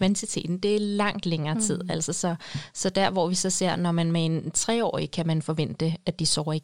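Nothing technical goes wrong anywhere in this short speech recording; it's just someone talking, with nothing to flag.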